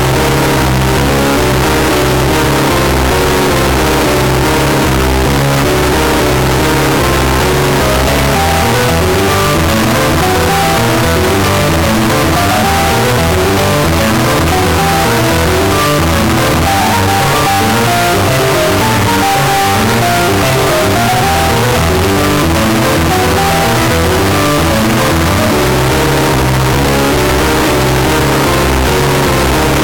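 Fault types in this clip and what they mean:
Float read as integer: The whole clip is loud, harsh and nearly square, at an almost fixed, high level. Likely cause: 32-bit float samples read as 32-bit integers.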